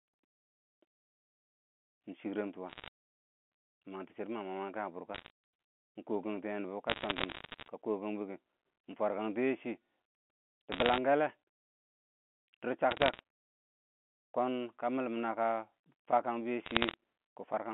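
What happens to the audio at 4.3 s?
Nothing goes wrong at 4.3 s: the speech continues intact through the narrow telephone band of the G.711 line, with no dropout, glitch or distortion at that moment.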